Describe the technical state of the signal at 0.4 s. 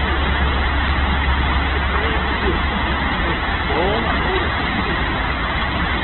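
At 0.4 s, as through the whole clip, the signal shows Opus compression, likely from an encoder starved of bits in its music (CELT) mode, consistent with a rate near 8 kbps. The codec keeps each band's overall energy but fills the detail with folded copies of lower bands or noise, so the sound turns rough, grainy and hissy rather than swirling. The audio is narrowband, with nothing above about 4.1 kHz, which leaves it dull and boxed-in.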